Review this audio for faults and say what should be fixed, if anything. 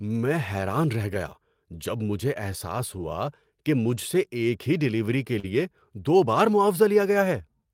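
Lost packets rebuilt from error correction occur at 0.73 s, 3.01–3.03 s and 5.43–5.49 s. Each time a packet went missing, the following packet carried a low-bitrate duplicate, and the decoder played that duplicate instead of leaving a hole. The first two spots are 20 ms patches and the third spans 40 ms, which fits two lost packets. These stretches sound briefly coarser and grainier, with no silence. Raising the forward error correction budget and reducing network loss would keep these rebuilt frames closer to the original.

Short concealed packet loss runs from 5.39 to 5.45 s. About 40 ms of audio arrived too late to be decoded, so the receiver extended the preceding sound, continuing its pitch where it was voiced and substituting shaped noise where it was not, for roughly 39 ms before blending back into real audio. It comes out as a quick smear or wobble, directly overlapping the rebuilt stretch that follows. 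A larger jitter buffer on the receiving side would give late packets time to arrive and prevent this concealment.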